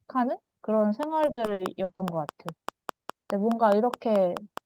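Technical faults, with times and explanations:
Throughout: sample clock jitter. The converter's clock wobbles by something like a microsecond or two, so each sample lands a touch early or late. That timing slip hurts most where the waveform moves fastest, which is why you get a faint hiss and grittiness riding on the louder, brighter parts of the speech, sitting roughly 45 dB down, and dropping away when the talker pauses.
1.03 to 4.65 s: train of clicks. From just after a second in, right to the end, there's a steady ticking at about 4.8 clicks a second, evenly spaced and all much the same shape. They poke out well above the speech, something like 15 dB over it, and keep going through the gaps too. A pulse that regular most likely comes from interference from nearby gear or a faulty connection or power supply.
1.25 to 2.01 s: repeated packet loss (robotic sound). In this stretch of under a second, the stream drops out six times, the longest hole about 60 ms, adding up to 260 ms of missing audio, about a third of the span. 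Each hole gets patched by stretching the last bit of sound forward, and the next one arrives before things settle, so the speech turns choppy with bits missing.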